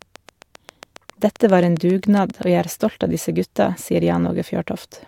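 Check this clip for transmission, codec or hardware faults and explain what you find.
There's one fault here: a train of clicks running from 0.02 to 2.44 s. About twenty near-identical pulses arrive at a regular 7.5 per second, peaking about 5 dB above the speech. That's likely interference or a struggling interface injecting pulses, heard as steady ticking over the speech.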